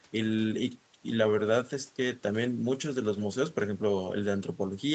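Nothing stood out on listening to this speech, which has the band-limited sound of a normal call path.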